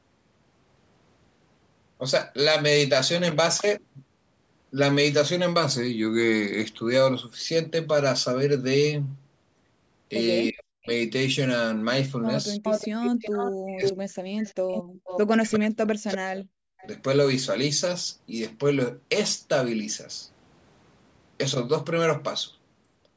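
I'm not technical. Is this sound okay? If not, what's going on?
No. It's a phone-style call recording where both ends talked at once.

Speech suppressed in double talk: the voice sinks almost to silence at 10.51–10.89, 13.65–14.16 and 15.37–16.86 s, likely because the echo canceller muted both talkers together.

Echo leak: a second copy of the voice arrives about 0.36 seconds late, at 12.63–13.93, 14.42–15.2 and 16.78–16.87 s. It's as loud as the speech at first, then fainter.

Background gated by the echo canceller: at 14.83–15.04 s the room sound briefly drops out, then comes back.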